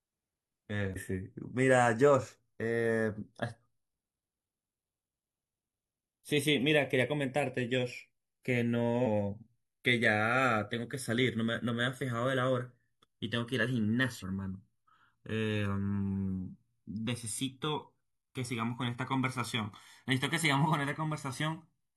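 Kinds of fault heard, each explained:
Channels drifting apart: the two channels sound like they were captured on separate clocks, a few tens of ppm apart, so the gap between them creeps up to around a millisecond over the speech. Summed to mono, that gives a slow, sweeping flanging whoosh.
Damaged data in a compressed stream: bits of the coded stream got corrupted, so the decoder misreads frames, loses its place and hunts for the next header. You hear short chirps or blips at 0.92–0.98, 6.59, 9.02–9.07 and 14.19–14.24 s.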